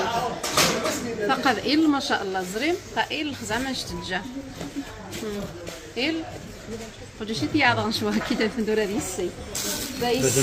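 No technical faults can be heard anywhere in the audio. Nothing in the recording or playback chain draws attention to itself at any point.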